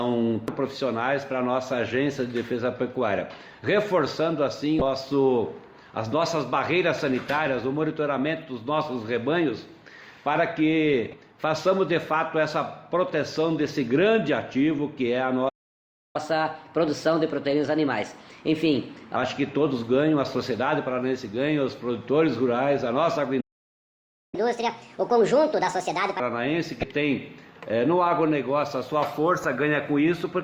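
The audio has three kinds of trouble. First, there's damaged data in a compressed stream: short glitches at 4.78 to 4.82 s, 11.11 to 11.14 s, 26.80 to 26.84 s, and a very brief one at 29.44 s. Each is where the decoder hit corrupted frames, lost sync and had to hunt for the next valid header. Then there are two playback stalls where the sound just drops out mid-flow. The first runs from 15.48 to 16.16 s, about 0.66 s of silence, and the second from 23.40 to 24.35 s, close to 0.93 s. The likely cause is the player starving for data, or its thread getting blocked, until it could resume from where it left off. Right after each stall comes catch-up at higher speed, as the player resamples to burn through the backlog. From 16.16 to 19.16 s it runs at 1.15 times speed, lifting pitch by about two semitones. From 24.35 to 26.20 s it jumps to 1.5 times speed, about seven semitones sharp.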